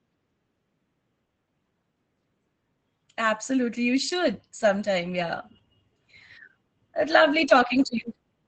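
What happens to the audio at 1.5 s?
Repeated packet loss hits from 1.25 to 1.85 s: several holes, the longest about 60 ms, are patched by stretching the preceding sound, making the speech choppy and robotic.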